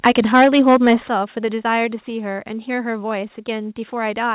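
From 0.05 to 0.94 s the loudest syllables carry a harsh, crackling edge, with peaks pushing about 7 dB past the converter's limit and around seven percent of samples flattened. That is microphone overload, likely from input volume set too high for the converter.

Within that stretch, at 0.07 s, the level drops abruptly by about 4 dB. A deeper drop of about 9 dB follows at 1.08 s, and a smaller one of about 2 dB at 2.10 s. Each sudden step points to microphone volume stepped down, the call software cutting input gain after detecting overload. Through all of it, the audio has nothing above 4 kHz, which fits a G.711 call codec.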